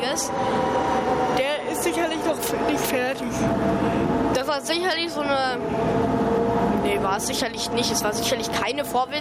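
The input gain was likely set far too high for the microphone, so a fast limiter clamps down on every loud moment, producing gain pumping throughout: the gain swings by around 15 dB, leaving the sound squashed and flattened in level.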